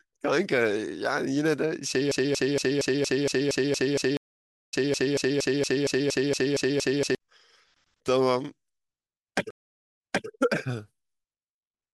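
From 2.12 to 7.15 s, the player likely stalled and kept resending its last fragment. The result is a broken-record loop in which a 232 ms piece of speech repeats back to back 21 times, and the speech meant for that span is lost. Within it, from 4.17 to 4.74 s, the connection dropped and a fresh decoder started mid-stream. This stream reconnect leaves 555 ms of silence, and the sound resumes roughly 0.3 s later. A second reconnect runs from 9.51 to 10.28 s, where the server resent a burst. After 485 ms of silence, playback restarts 287 ms earlier, so a short stretch is heard twice.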